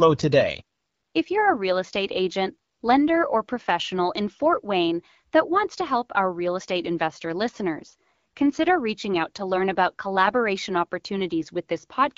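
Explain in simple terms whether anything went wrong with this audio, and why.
Nothing went wrong with this speech recording, and no moment in it stands out as faulty. The sound has gone through an AMR wideband (HD Voice) codec, the squeezing method used for HD phone calls, and it leaves only a light trace here.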